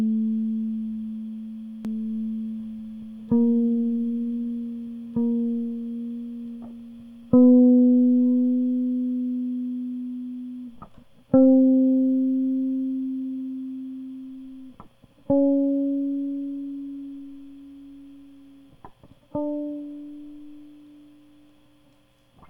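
From 1.85 to 7.39 s the music carries a doubled audio track, with a full-band copy arriving about two seconds late and roughly 5 dB quieter, likely from a second capture path. It starts and stops abruptly, appearing as repeated spectrogram patterns and stacked waveform transients.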